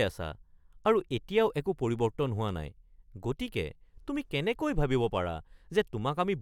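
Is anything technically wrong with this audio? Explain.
No, nothing technically wrong can be heard in this speech recording; the signal stays intact and steady throughout, with no audible faults.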